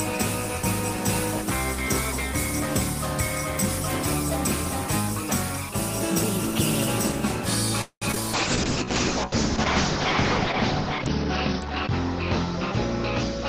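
At 7.81 s the audio stalls for about 0.2 s, to 8.04 s. What you hear is the last bit of sound stretched into a fading buzz, then about 70 ms of silence, and then it carries on exactly where it left off. That's a call audio freeze, most likely packets held up in transit so the jitter buffer ran dry. Nothing is lost, but everything after it now runs about 0.2 s late.

Right behind that, at 8.12 s and again at 8.15 s, come two short concealed packet losses, back to back. Each one drops about 20 ms of audio that never reached the decoder in time. The receiver papers over the first with roughly 14 ms and the second with about 7 ms of extrapolated sound before blending back in. By 8.18 s it's over, and what you catch is a quick smear or wobble rather than a clean dropout.

From 8.35 s to the end there's a call bitrate drop. The encoder goes from 32 kbps down to 7 kbps and sits at that floor for a couple of seconds. 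Along with the coarser coding, the audio bandwidth is narrowed from 20 kHz to 6 kHz, so the top end disappears. The sound goes dull and muffled, with a rough, watery texture that stays until the clip ends.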